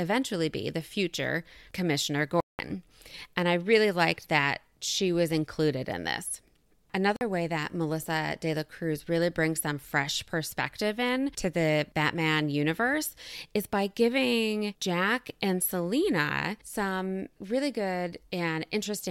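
At 2.40 s the speech cuts to silence for about 0.19 s, and at 7.16 s a shorter gap of about 46 ms falls just before "way that". Both are likely Bluetooth dropouts, where audio packets failed to reach the headphones in time and were discarded. The lengths fit several packets lost in the first gap and a couple in the second. Unlike a playback stall, the speech doesn't pick up where it stopped. It resumes further on, so whatever fell inside each hole is simply missing.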